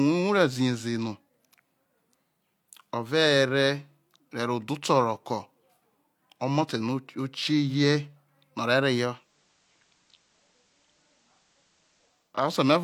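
At 9.03 s the speech shows digital radio blending to analogue: the receiver loses its digital stream and cross-fades over about 0.36 s to the FM signal. Faint hiss appears, and level drops about 2 dB until 12.40 s.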